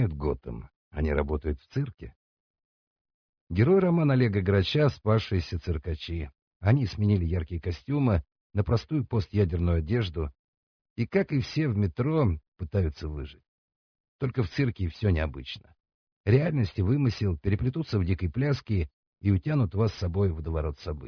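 Nothing in the sound stood out as a technical problem on listening.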